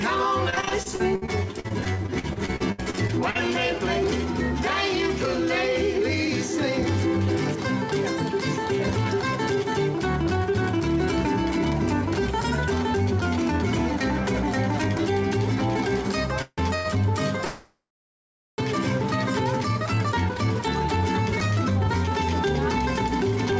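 From 0.50 to 3.37 s, repeated packet loss kept leaving holes in the stream. The receiver patched each one by extending the last sound, so about a quarter of this stretch is concealment. Two dozen or so gaps, the longest 64 ms, make the audio choppy and robotic. Roughly 0.5 s of the original sound is gone. Throughout, nothing is heard above 8 kHz, which fits the G.722 call codec at 64 kbps.

At 16.42 s there is a call audio freeze, likely from packets held up in transit until the jitter buffer ran dry. The last sound is drawn out as a fading buzz with 40 ms of silence, 0.18 s in all. The sound then resumes where it stopped, with nothing lost.

At 16.76 s a short stall from a late packet follows. One packet missed its slot, and the receiver stretched the preceding sound for 90 ms until it arrived. This leaves a held, slightly buzzy moment but no missing audio.

A second, longer freeze runs from 17.45 to 18.60 s. 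The held sound fades into about 0.8 s of silence before the audio picks up again from the same point, adding a 1.1 s gap.

From 19.86 to 23.52 s, jitter buffer speed-up sets in. With excess delay built up, the receiver trimmed many tiny pitch-period slices, around 150 ms in total. The sound therefore runs about 3 percent fast at unchanged pitch.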